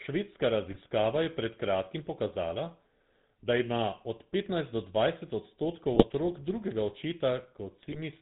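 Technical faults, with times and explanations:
Throughout: GSM full-rate codec. The speech is band-limited below 4 kHz with plainly audible buzzy, gravelly roughness, consistent with 13 kbps regular-pulse excitation coding.
0.70–0.78 s, 5.92–6.12 s, 7.83–7.99 s: GSM bit errors. Corrupted filter, pitch and gain parameters produce brief squawks and gargling, the first just before "je pred kratkim pokazala", the second after "od petnajst do dvajset".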